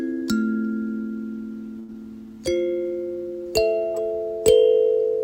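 The audio has three timing faults packed into less than a second. At 1.79 to 1.90 s there is a short stall from a late packet: the sound holds for 89 ms while the jitter buffer sits empty, then resumes from exactly where it stopped. Unlike a dropout, nothing is lost and the sound is only held too long. Right after, at 1.92 to 1.96 s, comes a skip ahead. Roughly 70 ms of material vanishes and the two sides are butted almost directly together, with about 14 ms bridging them, as the buffer sheds part of the delay it had just built up. A skip is distinguished from a stall by this abrupt forward jump with content missing, where a stall freezes and loses nothing. Then at 2.26 to 2.50 s a jitter buffer slow-down stretches the passage by 43 ms, so it plays at about 85 % of normal speed. The pitch stays put, which separates this from a tape-style slowdown, and the repeated pitch periods leave the sound drawn out rather than frozen.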